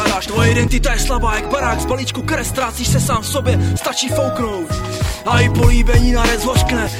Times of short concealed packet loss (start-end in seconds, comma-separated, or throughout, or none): none